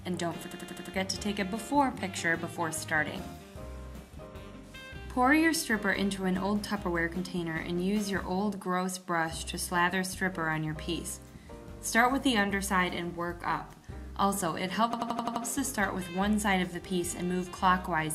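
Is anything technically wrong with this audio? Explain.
Yes, there are two system hang loops, at 0.51 to 0.94 s and 14.93 to 15.45 s. The system froze while the hardware kept replaying its ring buffer, so one 85 ms slice, consistent with a 4096-sample buffer, repeats five and then six times, producing an 11.7 Hz machine-gun stutter with almost nothing lost afterwards.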